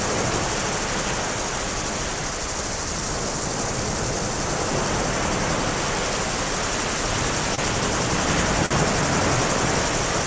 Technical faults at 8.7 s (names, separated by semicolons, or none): short stall from a late packet